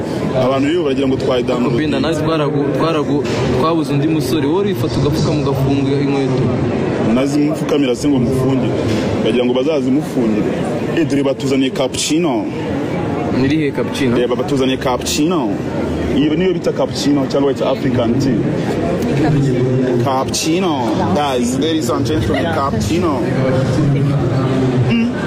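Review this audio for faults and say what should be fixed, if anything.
A Bluetooth SBC bit pool drop runs from 4.54 to 7.17 s, about 2.6 s. The link became congested, so the sending device cut the SBC bit pool. The sound points to a fall from around 28 to about 13, which fits roughly 102 kbps. With so few bits, the highest sub-bands get little or nothing and the remaining bands are coarsely quantised. Across that stretch the treble goes dull and a gritty noise rises, clearing once the rate recovers after 7.17 s. To prevent it, reduce radio congestion and interference on the Bluetooth link, for example by keeping the devices close and clearing competing 2.4 GHz traffic, or use a codec with more headroom so the encoder doesn't have to cut its bit pool.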